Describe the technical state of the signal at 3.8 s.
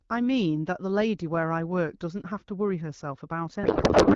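At 3.8 s the signal is inside a codec payload misread that runs from 3.63 s to the end of the clip at 4.16 s. The AMR wideband stream, which until then fits a 12.65 kbit/s rate and sounds clean, is packed octet-aligned but decoded as bandwidth-efficient, so every field lands in the wrong place. The speech gives way to garbled noise and warble that barely tracks it. A spectrogram shows smeared, structureless energy replacing harmonic bands, and the waveform loses its syllabic envelope.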